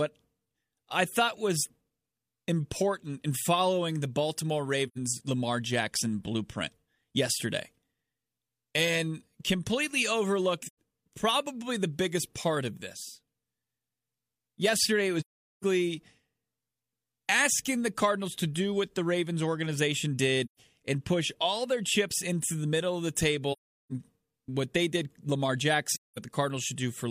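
AAC frame loss with muting appears at 4.87 to 4.98 s, at 10.66 to 10.75 s just before "probably the biggest part", at 15.20 to 15.64 s, at 20.45 to 20.59 s before "and push all their", at 23.52 to 23.92 s between "the middle of the" and "what they did", and at 25.93 to 26.19 s. Each time, the decoder received nothing for a stretch of coded audio and filled it with a zeroed spectrum. The overlapping transform windows fade the speech out and back in, leaving soft-edged silent holes. The gaps last from about 85 ms up to about 430 ms, and the longest is at 15.2 s.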